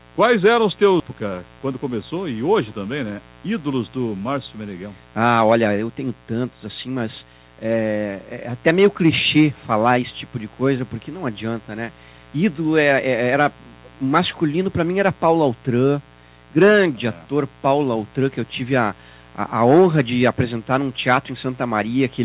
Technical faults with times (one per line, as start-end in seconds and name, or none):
0.00-22.25 mains buzz
1.00-1.02 skip ahead
1.13-2.11 jitter buffer speed-up